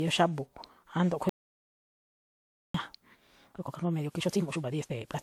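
Throughout the speech, the audio was likely re-encoded repeatedly with a lossy codec, consistent with about seven WMA passes at 128 kbit/s. This generation loss leaves a swirly, hollow texture and blurred attacks, with nothing above 20.1 kHz. From 1.29 s to 2.74 s, the input was likely lost while the recorder kept writing silence. This dropout to silence is a 1.45-second gap of complete silence with no room tone, and the speech cuts out and returns mid-flow. From 3.45 s to the end, software likely squeezed this time-stretched section to 1.67 times speed while holding pitch. The pace suddenly rushes, but the pitch stays the same.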